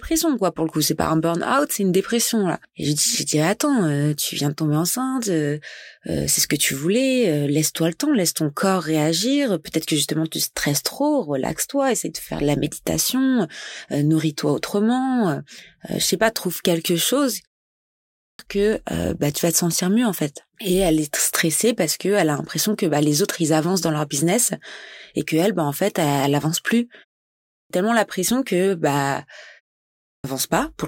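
At 17.92 s after "pas trouve quelque chose", 27.30 s after "elle avance plus", and 29.84 s, each about 0.4–0.47 s long, the speech shows a clipped start after a pause: the output device wakes late and swallows onsets. On a waveform or spectrogram, energy begins abruptly at full level, without any onset build-up.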